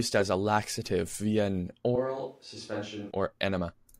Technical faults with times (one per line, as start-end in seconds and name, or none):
1.96-3.11 switch to a distant microphone